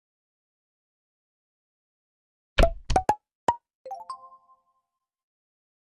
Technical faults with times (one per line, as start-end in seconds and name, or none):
0.00-5.83 MP2 compression